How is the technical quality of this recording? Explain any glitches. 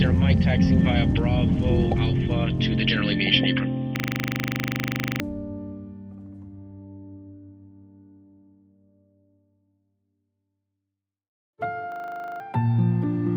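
The recording has two glitches, both a system hang loop, at 3.96–5.2 s and 11.92–12.4 s. In each, the computer or its audio driver froze while the sound hardware kept replaying its ring buffer, so a single 40 ms slice repeats exactly at 25 Hz. That fits a 40 ms buffer. It sounds like a rapid, rattling stutter, roughly 31 repeats in the first and 12 in the second. About one and a half seconds, then half a second, of real audio are lost.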